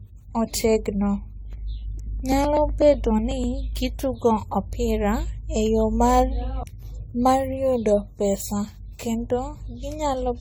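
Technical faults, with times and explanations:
Throughout, generation loss: swirly, hollow, smeared speech with blurred attacks, likely from about ten AAC-LC re-encodings near 64 kbit/s, each stacking fresh quantisation noise.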